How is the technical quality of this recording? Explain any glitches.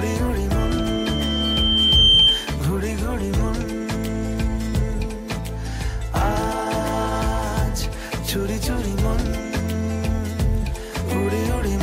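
The one real problem is a loudspeaker feedback squeal from 0.58 to 2.57 s. A mic is hearing the speaker it feeds, and at about 3.1 kHz the loop gain tips past one, so that frequency keeps feeding itself. You hear a single thin tone swell over roughly a second and a half until it sits about 10 dB above the program, a piercing whistle right up front, before it drops away.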